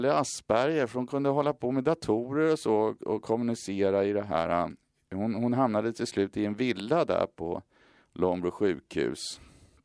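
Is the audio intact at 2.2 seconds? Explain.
Yes, at 2.2 seconds the speech plays through cleanly, with no dropout, click or other fault audible at that moment.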